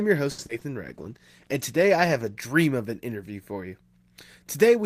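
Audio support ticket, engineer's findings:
Short stall from a late packet, 0.31 to 0.40 s. Sound held and stretched about 70 ms, slight buzz, then resumes at the same point with nothing lost. Jitter buffer ran dry waiting on a late packet; delay grew by 70 ms. Unlike loss concealment, no content skipped, just a hold.

Short concealed packet loss, 0.46 to 0.51 s and 0.59 to 0.63 s. Brief smear and wobble where audio never reached the decoder. Concealment extrapolates the preceding sound: about 30 ms synthesized over a 40 ms hole, then about 20 ms over a 20 ms hole, then crossfades back. Distinct from the stall: real content is gone here, so short consonants can drop out rather than being merely held.

Call bitrate drop, 0.85 to 2.46 s, ending just before "of an interview for". Speech turns rough and watery with dulled top end. Bandwidth estimate fell and Opus was pushed from 32 to 15 kbps, bottoming for about 1.5 s, coding coarsely and trimming high frequencies. 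Unlike the packet faults, this is a sustained quality change, not a momentary glitch, and it clears when the rate recovers.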